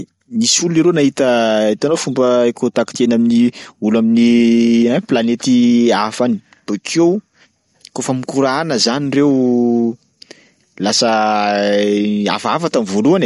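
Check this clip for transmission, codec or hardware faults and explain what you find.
One fault runs through the whole clip: MP3 compression is the likely cause. The speech has nothing above 11.2 kHz and plainly audible codec damage, consistent with a low bitrate of about 48 kbps, where the encoder drops the treble and zeroes weak frequency lines, giving a watery, swirly texture.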